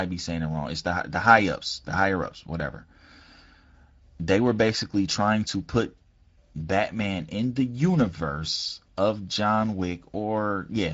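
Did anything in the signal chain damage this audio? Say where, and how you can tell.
Yes. Throughout the speech the sound is hoarse and noisy, with a buzzy grain and a hissy top that stops near 7.7 kHz. This is Speex codec damage, a wideband mid-rate setting whose CELP excitation is starved of bits, with only shaped noise filling above 4 kHz.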